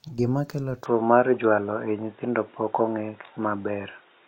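Just after 0.86 s the speech goes duller and boxier, nothing above 3.8 kHz, level shifting around 5 dB, faint new background noise, likely an input switched to a poorer device.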